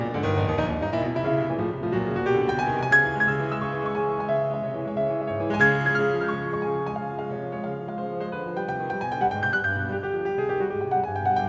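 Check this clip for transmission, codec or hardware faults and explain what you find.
No transmission, codec or hardware faults.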